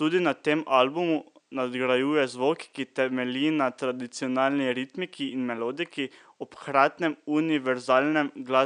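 No technical faults can be heard in this speech recording. A faint room noise sits underneath, about 48 dB below the speech, and belongs to the recording space rather than the system.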